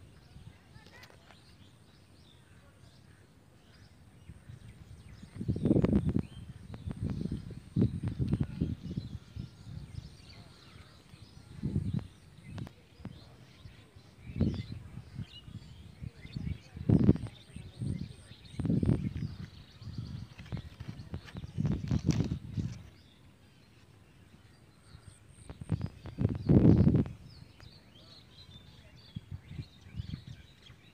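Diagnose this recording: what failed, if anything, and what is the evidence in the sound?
Nothing in the signal points to a failure at any stage of the chain, from the analogue wiring through conversion and transport to playback.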